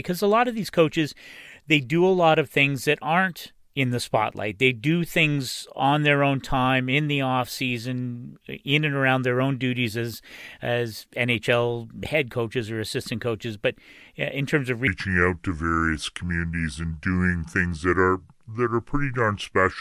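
From 14.87 s, after "in terms of", a wrong sample rate drops speed to 0.73 times and pitch by 5.5 semitones together, unlike a pitch shift, which keeps tempo.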